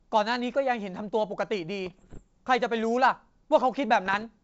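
From 1.86 to 2.22 s, and again from 4.06 to 4.24 s, the speech breaks into pops and rough, grainy bursts with brief level jumps. These are bit errors on an ADPCM link over the G.722 path. Each flipped bit knocks the decoder's step size and predictor off track, so the damage rings on briefly. The error rate is around a percent or so.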